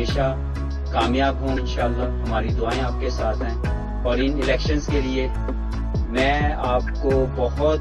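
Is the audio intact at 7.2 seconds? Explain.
Yes, at 7.2 seconds the audio is intact, with no dropout, distortion, glitch or other fault audible at that point.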